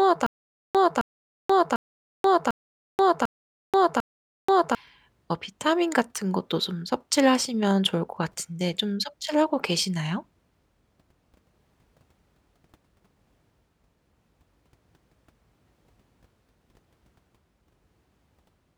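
From the very start, already under way, until about 4.75 s, the speech shows a stutter with silent gaps. A fragment of roughly 0.26 s plays, then drops into about 0.48 s of dead digital silence, and the same fragment returns. The cycle repeats six times at a steady 0.75 s period. The pattern likely comes from a stalled stream or player replaying its last buffered chunk on each retry, so the audio due in those intervals never plays.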